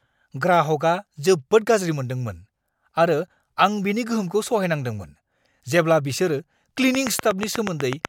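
From 6.95 to 8.06 s, after "गोहोमखौ सहायनांदोंमोन जेब्ला बिसोर", a train of clicks ticks at 8.2 per second, likely interference; near-identical, regular pulses, not crackle.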